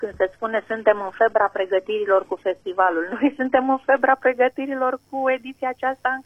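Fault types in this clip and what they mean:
Adaptive stream starting at a low bitrate: the player opened on a heavily compressed version of the stream for a quick start, then switched up once it had gauged the connection. From 0.0 to 4.0 s nothing sits above 12.3 kHz, the top end sounds synthetic, and codec artefacts are stronger, which points to roughly 16 kbit/s HE-AAC. At 4.0 s the quality jumps with no gap, fitting a switch to about 96 kbit/s AAC-LC.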